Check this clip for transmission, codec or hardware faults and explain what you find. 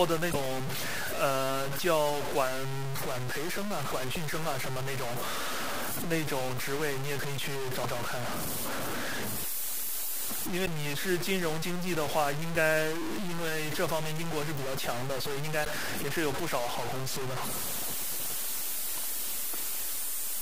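Two faults are present, one running through the whole clip and one recurring in short bursts.

Throughout, the speech is coarse and grainy, with distortion nearly as loud as the signal itself. This is low bit depth without dither, likely truncation to about 4 bits.

At 0.30–0.36, 4.14–4.17, 7.80–7.85, 10.62–10.67 and 15.61–15.66 s, there are brief squawks and blips. This is damaged data in a compressed stream: corrupted frames make the decoder lose sync and resync.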